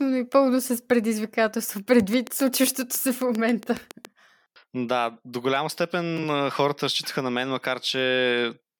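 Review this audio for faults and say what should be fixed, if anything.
A train of clicks runs from 2.0 to 4.06 s, starting just after "и пълно с предизвикателство": about fifteen near-identical pulses at a steady 7.3 per second, peaking about 15 dB above the speech and ticking through the pauses as well. Such evenly spaced, same-shaped pulses are likely interference from nearby equipment or a faulty connection or power supply. To prevent it, move or power down the offending gear, check the interface connection and cabling, and re-record the passage.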